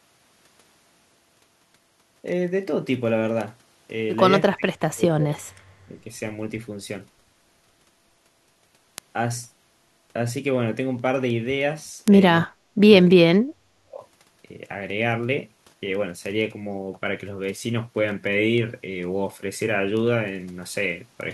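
Speech with word clock ticks running from 0.16 to 21.21 s, a sharp click about every 0.15 s, each one a single slipped sample from an unlocked digital link drifting around 150 ppm. There's also speech suppressed in double talk, where the voice dips or drops out at 4.48–5.41, 5.86–6.05, 12.46–12.91 and 13.33–14.03 s, sinking by up to around 40 dB, likely an echo canceller ducking while both sides talked at once.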